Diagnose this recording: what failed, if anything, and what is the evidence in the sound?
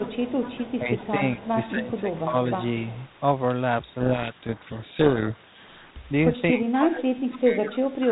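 Echo leak, in call processing: a faint delayed copy of the speech trails it by 238 ms at 0.00–1.08 s, 1.40–2.20 s, 2.91–3.05 s and 7.75–7.79 s, about 20 to 30 dB below the direct speech. The likely cause is a far-end loudspeaker echo the canceller failed to remove. A room reflection would be continuous, not come and go in scraps at a fixed delay.

Speech suppressed in double talk, also call processing: the speech level sags at 0.80–1.21 s, 1.71–2.34 s and from 6.52 s to the end, by roughly 5, 10 and 20 dB in turn, likely because the echo canceller ducked the talker while the far end spoke. Unlike a dropout, the sound dims rather than going silent.

Codec payload misread, at the codec stage: from 4.00 to 5.95 s the speech is buried in harsh, rasping distortion. The decoder reads G.726 code words with their bit order reversed. Ordinary 32 kbit/s G.726 noise is light and follows the speech level, but this abruptly swamps the speech for the whole stretch.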